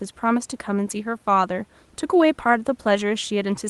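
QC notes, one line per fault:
No faults found.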